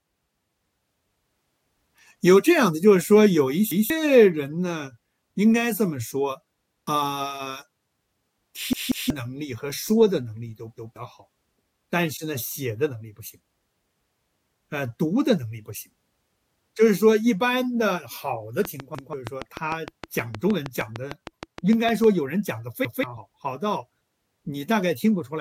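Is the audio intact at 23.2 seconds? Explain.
No. At 23.16 to 23.18 s a few compressed frames are skipped, roughly three, so about 70 ms of speech never plays. The decoder jumps ahead by whole frames, so the speech skips forward at the join.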